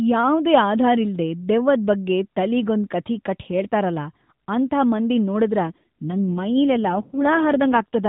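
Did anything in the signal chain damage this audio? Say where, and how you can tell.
Yes. From 5.66 s to 8.08 s the speech turns rougher and buzzier, with no gap or band change. This is an AMR rate drop at the codec, consistent with a fall from 12.2 to 5.9 kbps.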